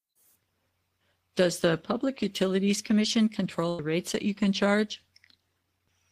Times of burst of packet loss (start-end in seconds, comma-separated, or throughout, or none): 3.69-3.80